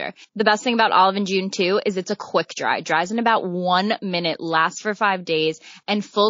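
Throughout, the speech has plainly audible MP3 compression, likely near 32 kbps: truncated treble, and weak frequency lines flickering between frames into a watery swirl.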